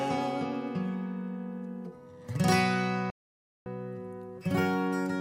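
The audio contains one audio dropout to silence, from 3.10 s to 3.66 s. The sound stops mid-flow and resumes just as abruptly, leaving a gap of about 0.56 s with no room tone, so whatever occurred in that window is lost. The likely cause is a break in the input path, such as a disconnected device, a failed link or a stray mute, while recording or encoding continued to write silence.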